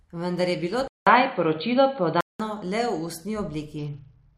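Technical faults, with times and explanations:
0.88–2.40 s, input switched to a poorer device: after a 190 ms gap the sound goes dull and boxy, nothing above 4.5 kHz, a few dB off in level. Likely a fallback microphone.
3.78–4.38 s, Bluetooth SBC bit pool drop: treble dulls and gritty noise rises to the end, which fits the bit pool falling from 28 to 8, around 72 kbps.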